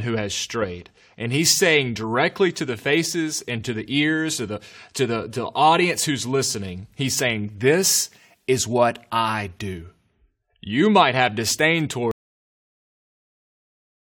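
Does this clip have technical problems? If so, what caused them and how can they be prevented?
Yes. A cut-off end occurs at 12.11 s, just after "might have disdain". The speech stops mid-sound and falls straight into digital silence with no natural decay, and that silence runs for about 2 s until the clip finishes. The final buffers of audio were never written to the file or played out, so whatever followed was lost at the recorder or player. To prevent it, flush and close the recording stream completely before stopping capture or ending playback.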